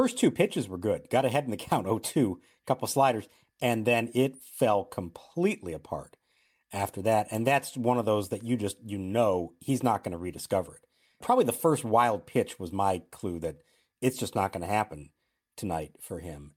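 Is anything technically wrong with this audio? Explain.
No, nothing technically wrong can be heard in this speech recording. There are no audible faults anywhere in the clip.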